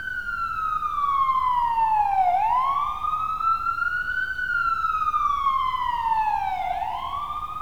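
From start to end, the audio carries low bit depth without dither. Quiet passages turn gritty, and the grain moves with the sound. The noise sits roughly 40 dB below the signal. This likely comes from rounding to 8 bits with no dither.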